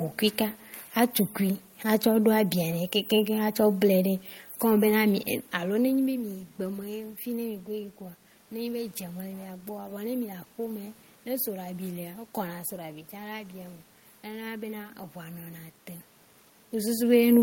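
No technical faults can be heard anywhere in the recording.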